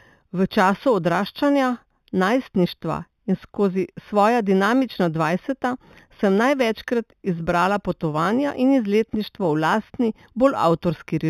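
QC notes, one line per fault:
Throughout, imaging from linear upsampling: the highs are dulled and fade out near 4 kHz. A faint mirror image, roughly 25 dB down, sits between 4 and 8 kHz and gives sibilants a light metallic shimmer. This fits 8 kHz audio raised to 48 kHz by straight-line interpolation, which filters weakly.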